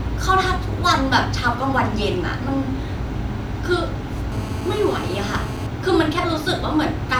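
From 4.32 to 5.67 s there's GSM phone buzz: a nearby 2G handset on a call, rectified into a steady, raspy 217 Hz buzz about 15 dB under the speech.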